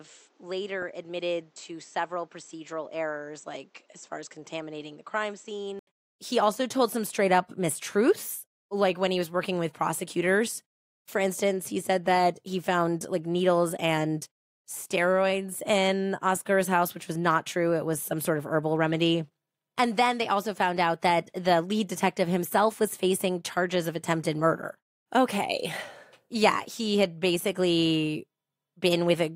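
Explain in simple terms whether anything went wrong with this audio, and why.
For the first 5.9 seconds the speech sounds dull, quieter and slightly noisier, with nothing above 8 kHz. It then clears abruptly after a brief 80 ms gap. That points to the input having likely switched to a poorer device. A steady filter wouldn't also change the level and background noise together.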